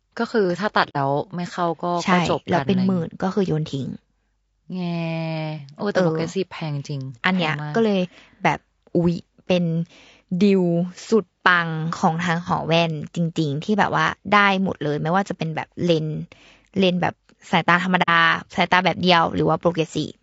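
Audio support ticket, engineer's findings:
Low-delay AAC compression, probably AAC-ELD at a low rate consistent with about 32 kbps. The low bitrate leaves too few bits for the spectrum, so the speech sounds rough and grainy throughout, with noise filling between harmonics and a thinned, synthetic-sounding top band. Damage plainly audible.

AAC frame loss with muting at 0.89 s and 18.02 s. The decoder zeroed the spectrum of missing frames, and the gaps fit about two frames each. Overlapping windows fade out and back in, leaving soft-edged holes of roughly 70 ms.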